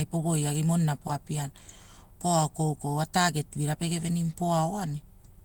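Speech recording with no audible technical faults.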